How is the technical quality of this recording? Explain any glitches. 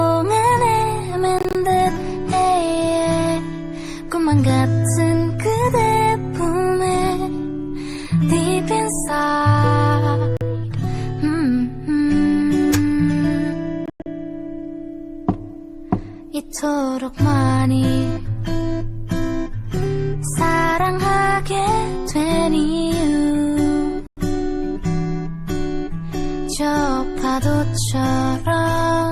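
The recording has four brief silent gaps, at 1.39–1.55 s, 10.37–10.41 s, 13.86–14.06 s and 24.07–24.17 s. These are likely Bluetooth dropouts: late packets were discarded and the sound resumed further on. On a waveform and spectrogram each gap appears as a sharp-edged vertical blank, two of them broken into separate holes.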